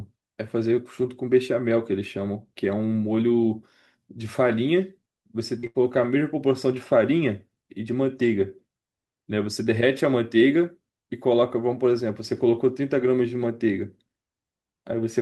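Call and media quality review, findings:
Short concealed packet loss, 5.59 to 5.66 s: brief smear in the speech. About 40 ms never reached the decoder in time. Receiver-side concealment extended the preceding sound for 34 ms, then crossfaded back into real audio.

Burst of packet loss, 5.67 to 5.77 s, immediately after: consecutive packets lost or arrived too late. About 80 ms missing. The jitter buffer and decoder carried the last sound forward for 77 ms while attenuating it, then resumed later, with the intervening speech gone.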